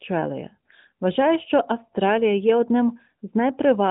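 No technical faults are present.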